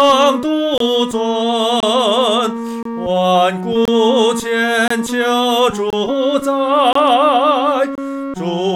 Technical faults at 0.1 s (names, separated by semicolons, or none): none